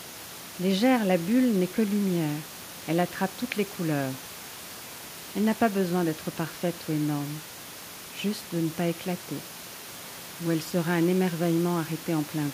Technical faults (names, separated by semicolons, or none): none